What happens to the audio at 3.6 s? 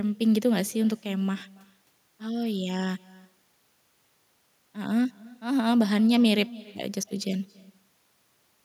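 At 3.6 s the speech carries an echo with no canceller, a fault present for the whole clip rather than just that moment. The far end is playing the call through a loudspeaker, its microphone catches that playback, and nothing strips it out before it travels back. So each syllable returns roughly a third of a second later, about 22 dB below the direct speech, as a faint, thin shadow trailing the talker.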